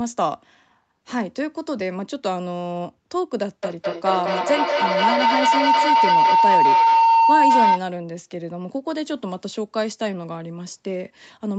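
From 3.63 s to 7.89 s a feedback howl builds: sound looping between two devices in the same room gains level each trip, narrowing to a tone near 1 kHz, with the loop repeating roughly every fifth of a second, and it peaks about 7 dB above the speech. Unlike echo, whose repeats fade, these repeats grow, and the top end stops at 8 kHz, which fits the call path's bandwidth.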